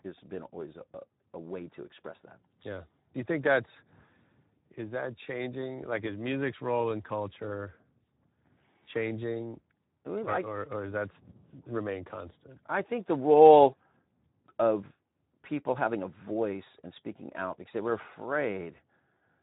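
Throughout, the speech carries Speex codec damage: a coarse, hoarse grain from a thinly coded excitation, which fits a low bitrate of around 11 kbps.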